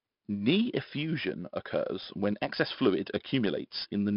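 4-bit ADPCM compression affects the whole clip. Each sample is stored as a coarse 4-bit step from a prediction, so a gritty hiss rides on every loud stretch of speech and sharp onsets distort. Nothing sounds above 5.3 kHz, which fits a stream near 44 kbps.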